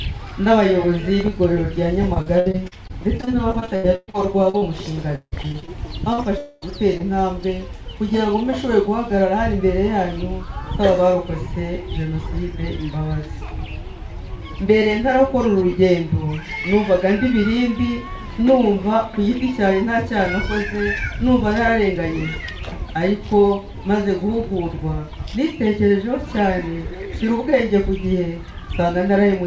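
From 2.14 to 4.63 s the sound turns choppy. This is repeated packet loss, heard as a robotic sound. Seventeen holes follow one another closely, the longest about 0.12 s, and about a quarter of the stretch is filled by the receiver stretching out the last bit of audio. The same thing returns, denser, from 5.15 to 5.69 s: six holes, one as long as 0.16 s, with nearly half the span patched. Its mark is the rapid, rhythmic chain of repeats. A single isolated glitch would not sound like this.

Short concealed packet loss comes next at 6.13 to 6.20 s, a hole of about 40 ms, and again at 7.0 s, where about 20 ms is missing. Each is a single smear or wobble where the decoder carried the previous sound forward and blended back. Unlike the robotic stretches, these are lone events, too brief to set up a choppy rhythm, though a short sound can vanish inside one.

Between them, from 6.38 to 6.64 s, about 0.24 s of audio is replaced by the continued last sound, most likely from a long network dropout. 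The gap is bridged by a single extended fill with no silence, and the sound resumes afterwards without the lost portion. That one extended smear is what separates it from the brief smears on either side. Throughout, nothing is heard above 8 kHz, which fits a wideband call codec.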